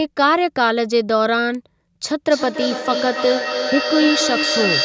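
At 1.55 s a single sharp snap cuts in over the speech. It is one very short burst, lasting only a couple of milliseconds. This is an electrical switching spike, likely from a nearby switch or static discharge arcing into the audio line.

From 2.24 s to the end, the speech returns as a delayed copy. This is feedback echo between two devices. One device plays the other's audio, and its microphone sends it back round. The repeats arrive roughly every 300 ms. At their loudest they sit only about 4 dB below the speech.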